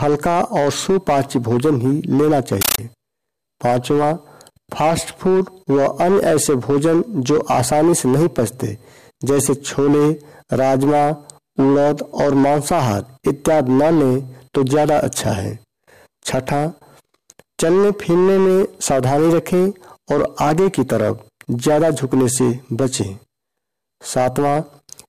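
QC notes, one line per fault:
2.61–2.78 s: compressed stream played as audio. The sound is replaced by very loud, harsh chattering static. An AC-3 bitstream on the digital link was taken as plain samples instead of being decoded, and the burst density fits a 640 kbps stream. Each coded frame plays as a 13.3 ms block of noise followed by silent padding, 31.25 times a second. The waveform shows rectangular blocks separated by flat gaps. The spectrogram shows broadband vertical stripes 32 ms apart.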